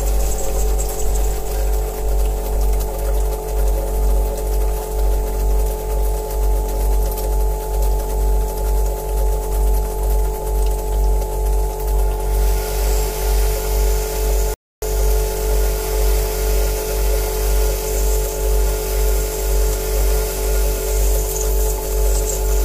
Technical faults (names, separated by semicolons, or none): mains hum; rebuffering stall